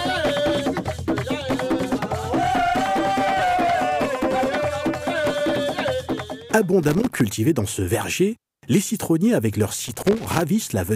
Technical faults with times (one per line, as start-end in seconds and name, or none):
6.83-7.20 loose connector crackle
9.85-10.41 loose connector crackle